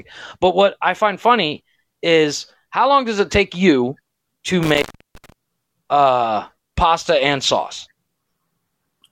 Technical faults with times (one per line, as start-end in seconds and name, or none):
4.63-5.32 intermittent contact